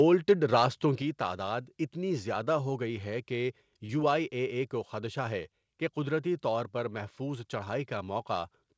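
At 1.02 s the speech suddenly gets quieter by about 5 dB, just before "تعداد اتنی زیادہ ہو". The voice and the room sound fall together in a single step. This is a microphone volume stepped down. The likely cause is the call software judging the input too hot and lowering the device's input level at once. It sounds like someone turned a fader down mid-phrase.

From 3.86 to 3.92 s there is short concealed packet loss, between "ہو گئی ہے کہ" and "آئ اے اے کو". About 30 ms of audio arrived too late for the decoder. The receiver filled the gap by stretching the preceding sound for about 29 ms, then blended back into the real signal. It is heard as a brief smear or wobble in the voice. The call path's G.722 coding, with nothing above 8 kHz, colours that smeared moment as it does the rest.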